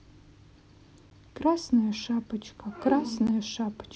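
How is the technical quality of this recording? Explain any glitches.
The recording has two brief dropouts in the speech. At 1.1 s and again at 3.27 s, a block of digital silence 12 ms long cuts in. A run of samples has been replaced by zeros, as happens when the output buffer is not filled in time. The signal stops dead and returns with no fade. At this length, each gap sounds like a sharp tick rather than a hole.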